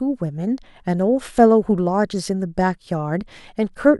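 Listening through the speech here, nothing stood out as a technical fault.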